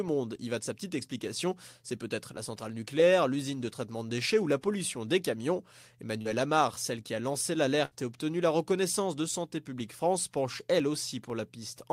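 At 6.21 s, after "la pollution des camions", a short concealed packet loss: about 40 ms never arrived and was bridged by extending the previous sound, heard as a brief smear. At 7.85 to 7.93 s, between "celle qui a lancé" and "et obtenu la reconnaissance", a burst of packet loss drops about 60 ms, replaced by a fading continuation of the last sound. From 9.30 to 11.80 s, after "obtenu la reconnaissance de", periodic USB or driver dropouts skip about half a millisecond roughly every 0.5 s, around seven regular ticks in all.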